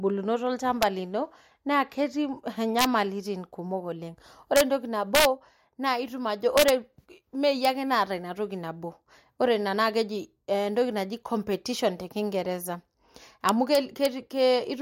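A gain or mixing stage lets loud peaks run past the largest value the integer format can hold, and instead of being limited they wrap to the opposite extreme, an integer overflow. Overdriven by only about 1 dB or less, the speech peaks flip across the full range, giving harsh cracks far sharper than clipping at 0.83 s, 2.79 to 2.84 s, 4.56 to 4.61 s, 5.15 to 5.25 s, 6.58 to 6.69 s, 7.65 s, and 13.49 to 14.06 s.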